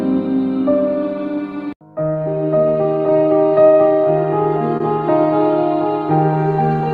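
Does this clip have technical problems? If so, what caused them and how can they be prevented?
Yes. Around 4.77 to 4.82 s there is short concealed packet loss: 20 ms of audio reached the decoder too late, so the receiver extended the preceding sound for 23 ms and blended back, leaving a brief smear or wobble. A larger jitter buffer or forward error correction would prevent it.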